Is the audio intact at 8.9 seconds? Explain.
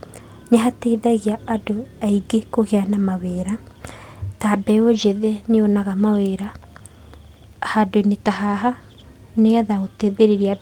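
Yes, the speech at 8.9 seconds is intact, with no audible dropout, click, distortion or other fault at that moment.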